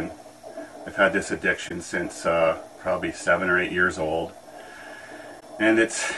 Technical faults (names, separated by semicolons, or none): corrupt frame concealed